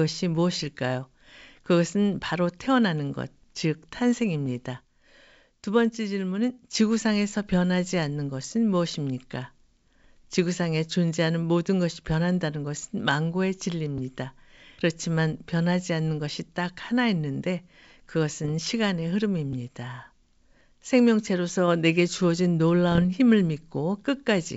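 Speech over a wideband G.722-style link, with bit errors on an ADPCM link at 18.44–18.51 s and 22.92–23.05 s: corrupted codes derail the decoder's step size and predictor, producing pops and rough level-jumping bursts.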